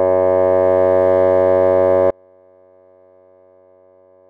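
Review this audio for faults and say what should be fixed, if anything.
At 2.10 s the music cuts out abruptly and never returns, leaving only a faint trace around 35 dB below its normal level through to the end. This audio dropout to a faint residue likely comes from the source signal being lost while the downstream path stayed live. Secure and monitor the source connection during capture so a lost feed is caught and re-recorded.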